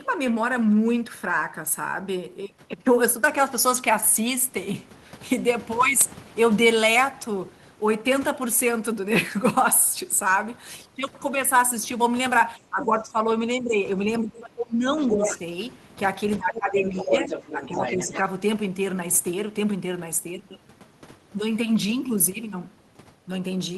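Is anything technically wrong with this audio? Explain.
Yes. From 12.57 to 18.13 s the speech keeps getting pushed down by what sounds like speech suppressed in double talk. There are dips at 12.57–13.35, 13.53–13.84, 14.2–15.34, 16.43–17.3 and 17.52–18.13 s, mostly around 10 dB and roughly 20 dB at the deepest. That's likely an echo canceller that can't tell the talker from loudspeaker echo while both sides are talking, so it ducks everything.

There's also the other side's voice leaking through, at 15.04–15.39 s and again at 16.48–18.19 s. It sits only about 5 to 10 dB under the main speech. That's likely far-end audio from the loudspeaker that the canceller didn't fully strip from the mic.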